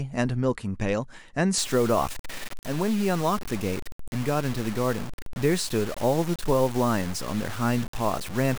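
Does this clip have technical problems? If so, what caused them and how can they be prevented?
Yes. From 1.58 s to the end, the speech turns grainy and gritty, with a rough distortion that tracks the voice and gets worse as it gets quieter, and the softest bits sputter or drop out. That's likely low bit depth without dither. The signal was chopped down to very few levels and the error follows the waveform. It sounds like roughly 5-bit truncation, with the noise sitting only around 15 dB under the speech. To prevent it, keep the full bit depth through processing and always add dither when reducing it at the end.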